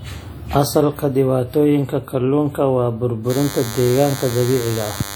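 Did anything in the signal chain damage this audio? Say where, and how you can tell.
Yes. Throughout the clip the speech carries a ringing, washy smear, with hiss that swells and fades with the signal and is plainly audible, even though the band reaches 20.1 kHz. That points to the codec stage, likely WMA compression at a low rate near 48 kbps. A steady noise floor would not track the speech like this.

From 3.30 s, just after "dhibaatooyinka kalluunka waa", to the end at 5.16 s, a thin buzz repeating at 100 Hz with dense harmonics sits roughly 10 dB below the speech. This is DECT cordless phone buzz: 10 ms radio bursts rectified in the analogue wiring. Mains hum would be a smoother 50 or 60 Hz tone.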